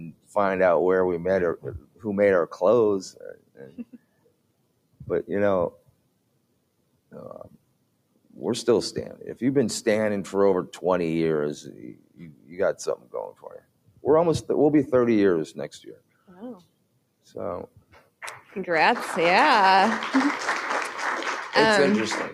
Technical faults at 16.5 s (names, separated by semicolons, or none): noise suppressor applied to music or sounds; sound cut by the noise suppressor